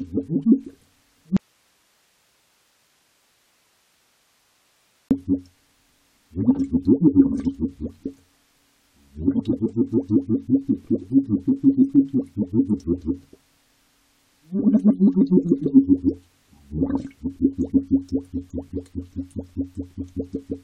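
An audio dropout to a faint residue runs from 1.37 s to 5.11 s, removing about 3.74 s of the sound. The audio cuts off abruptly rather than fading, and the gap holds only hiss, roughly 45 dB below the normal signal level, before the sound snaps back in mid-flow. The wanted signal was likely lost upstream while the path after the break stayed live, so only its own background noise came through.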